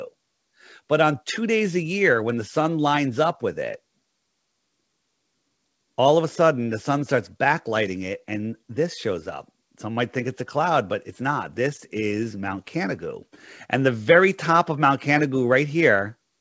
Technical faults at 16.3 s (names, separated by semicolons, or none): none